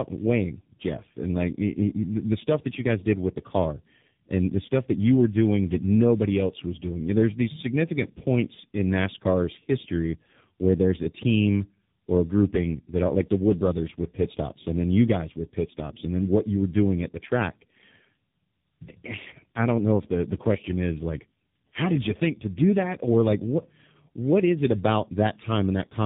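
Throughout the clip, the speech passed through tandem speech coding: two low-rate speech codecs in a row, with a G.711-like mu-law link between them. The sound fits G.723.1 at roughly 6.3 kbit/s followed by AMR-NB at about 10.2 kbit/s. Each stage re-encodes the previous one's losses, so the speech sounds rough, noisy, muffled and warbly, with nothing above 3.8 kHz.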